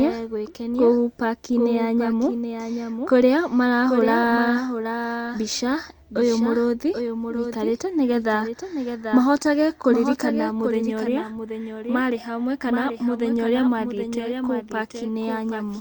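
From start to finish a doubled audio track runs under the speech: a second full-band copy trails about 0.7 s behind at around 5 dB quieter, likely from the audio being captured twice along a slower path. Unlike room echo or reverb, it carries no decay or room colour, just a clean, flat repeat.

Also throughout, clock drift between sender and receiver is present. The sender's clock runs roughly 2 percent slow, so the receiver's buffer keeps draining. That steady one-way pull separates it from random network jitter, which would push timing both ways.

From 0.38 s to 15.67 s this drift shows up as repeated timing corrections. The receiver keeps repeating short pieces, all lengthening the audio, adding up to roughly 300 ms and an effective 98 percent pace. They come as small, unevenly spaced hiccups and a slightly unsteady tempo, not as single dropouts.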